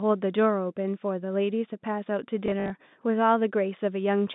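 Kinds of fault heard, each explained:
Packet loss with last packet repeated: from 2.46 to 2.7 s, 120 ms of lost audio scattered over 240 ms is filled by replaying the previous chunk, in runs of up to 60 ms. Unlike dropouts, nothing goes silent. Instead it stutters robotically with a 50 Hz buzz or flutter, which fits 20 ms packets.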